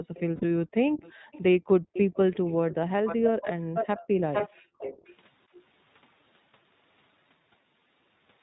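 The whole clip is speech carried by the iLBC codec at 15.2 kbps in 20 ms frames. Each frame is coded on its own, and nothing above 4 kHz survives. The speech sounds muffled, slightly rough and synthetic. The coding damage is plainly audible.

From 0.03 to 1.32 s the background is gated by the echo canceller. It pulls the microphone down by as much as about 40 dB while the far-end loudspeaker plays. The room sound drops out for roughly 0.7 s in total, in dips, then returns.

A faint delayed copy of the speech appears at 0.14 to 0.2 s, about 25 dB below the main voice and 364 ms late. This is likely an echo leak: the far end's canceller let loudspeaker sound reach its microphone and sent it back.

At 0.36 to 0.44 s, lost iLBC frames leave a 60 ms gap, about three frames. The decoder fills it by repeating the last pitch cycle mixed with noise. It sounds like a short, buzzy held vowel. Clean speech resumes almost immediately.

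The echo leak returns at 1.01 to 1.43 s, again 364 ms behind and about 25 dB down. A brief gating dip follows at 1.79 to 1.93 s, lasting about 150 ms. Then the echo grows. From 1.93 to 2.75 s it sits only about 10 dB below the speech.

From 2.55 to 4.78 s the gating returns, up to about 40 dB deep. The room sound drops out for roughly 1.5 s across that stretch.

The worst echo runs from 3.06 to 5.14 s. Its delay shifts to 456 ms, and at about 5 dB down it nearly matches the main voice. A last faint trace, about 30 dB down, comes at 5.54 to 5.61 s.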